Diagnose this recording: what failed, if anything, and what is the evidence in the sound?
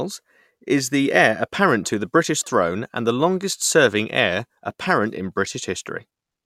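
Nothing in the recording points to a failure at any stage between capture and playback. The speech runs on without any event that would mark a broken path.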